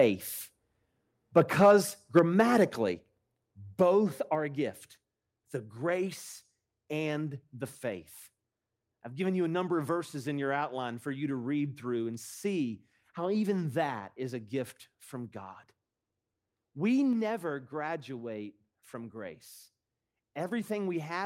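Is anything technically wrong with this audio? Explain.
Yes, the speech has two kinds of fault.

Microphone overload occurs at 1.36–1.72 s and 2.16–2.42 s, likely from excessive input gain. Peaks are shorn about 3–4 dB over the limit, giving harsh crackle and flat-topped waveform peaks.

Microphone volume stepped down at 2.19 s and 4.35 s, before "a gift the grace". This is likely automatic software gain reduction. Voice and background drop about 4 dB, a sudden waveform step.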